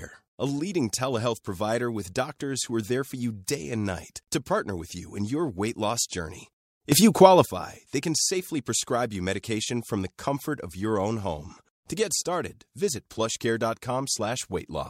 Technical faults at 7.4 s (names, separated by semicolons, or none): sudden gain jump